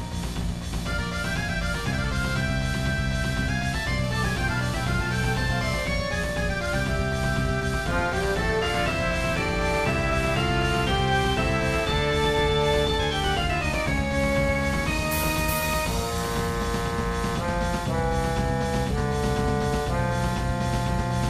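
Two bursts of GSM phone buzz sit in the sound, from 4.04 to 5.88 s and again from 14.32 to 15.29 s: a hard, raspy 217 Hz drone with many harmonics, about 17 dB below the audio and nearly steady. A nearby phone on a call was likely pulsing its transmitter, and the audio circuitry rectified those pulses.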